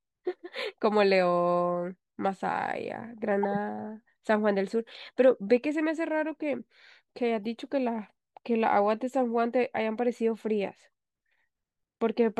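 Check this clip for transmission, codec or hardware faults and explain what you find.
The clip is speech with two corrupt frame decoded faults. The first runs from 3.43 to 3.57 s. The second is a brief fault at 7.44 s. In both, flipped bits in compressed frames were decoded anyway. Misread codes and gains put energy at wrong frequencies. The first fault is fairly loud, near -20 dBFS, and its length points to several damaged frames in a row. The second is much quieter, around -45 dBFS, and fits a couple of frames.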